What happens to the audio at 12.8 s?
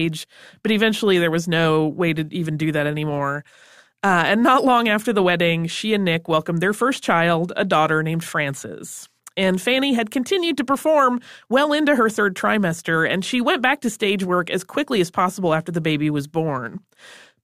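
Nothing goes wrong at 12.8 s; the speech there comes through intact, with no dropout, click or distortion.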